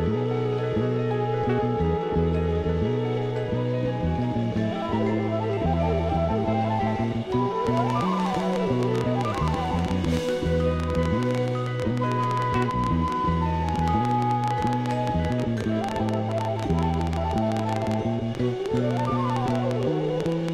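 From 7.67 s to 20.5 s a train of clicks runs over the sound, about 150 similar pulses at an uneven rate near 9.8 per second, peaking around 10 dB above the signal. It is likely interference or a faulty connection or power supply. Unlike random crackle, the clicks share one shape, and they persist through pauses.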